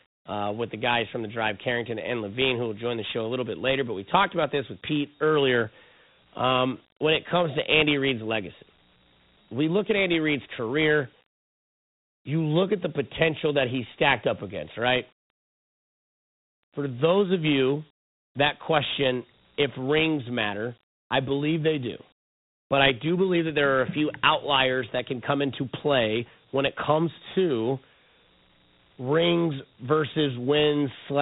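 From start to end, the speech carries Dialogic VOX ADPCM damage. Nothing sounds above 3.9 kHz, and a gritty hiss trails the voice, which fits 32 kbps 4-bit coding.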